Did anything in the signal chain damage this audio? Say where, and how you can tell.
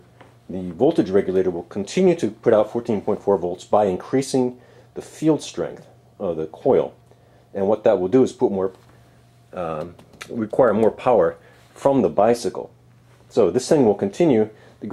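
No, nothing in the signal chain audibly damaged this audio. None of the stages between capture and playback leaves a mark that can be heard anywhere in the clip.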